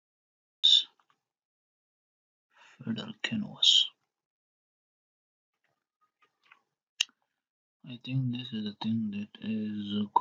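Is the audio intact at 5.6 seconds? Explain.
Yes, at 5.6 seconds the audio plays through cleanly, with no dropout, click, distortion or other break in the signal.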